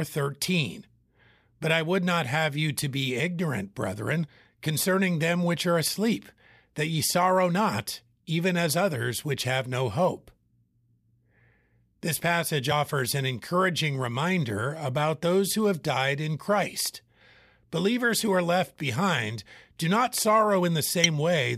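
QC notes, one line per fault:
4.27 s, damaged data in a compressed stream: a short blip right between "to be ignorant brethren" and "concerning them which are". A bit of the compressed data got mangled there, so the decoder misread that frame, lost its place and hunted for the next good frame header.
21.04–21.06 s, damaged data in a compressed stream again: another quick blip near the end, from the same kind of corrupted frame and the decoder resyncing past it.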